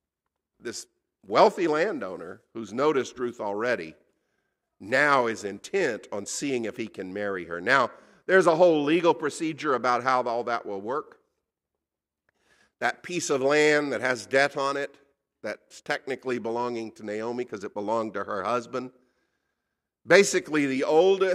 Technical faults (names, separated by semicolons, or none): none